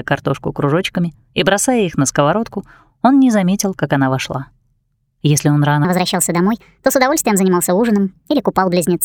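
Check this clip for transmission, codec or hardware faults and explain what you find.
One fault is present: a section at the wrong speed, from 5.85 s to the end at 9.04 s. The sound runs 1.3 times too fast, lifting pitch about five semitones, likely from playback against a mismatched clock. Unlike a pure pitch shift, tempo and pitch jump together.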